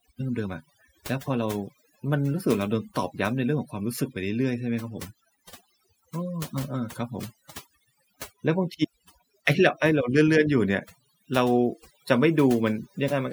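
Across the whole recording the speech carries overdone noise removal: the denoiser was pushed too hard, muting frequency bands it judged close to the noise floor. The background falls to near silence with twinkling specks, and quieter parts of the voice vanish too.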